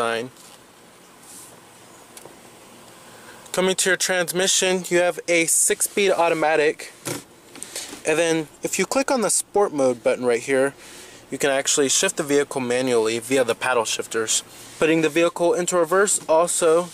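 No technical faults are audible anywhere in the clip.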